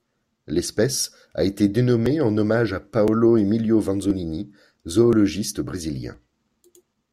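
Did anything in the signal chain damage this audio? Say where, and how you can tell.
Yes. The speech carries a series of small, evenly spaced ticks from 1.05 s to 6.14 s, one every 1.02 s, about seven in all, each sounding only where there is signal. At each tick a few milliseconds of audio, around 4 ms, simply vanish and the waveform jumps ahead, leaving a click at the join. That clockwork regularity points to periodic USB or driver dropouts at the driver or buffer stage, where some recurring background task stalls the bus and a chunk of samples is skipped.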